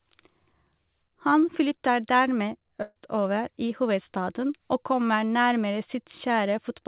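A burst of packet loss runs from 2.82 to 2.98 s on the G.711 call path, which already carries nothing above 4 kHz. About 140 ms of speech never arrived, so the receiver stretched the last sound into a fading buzz or hiss for about 135 ms, fell silent for 10 ms, then resumed further on with that stretch missing.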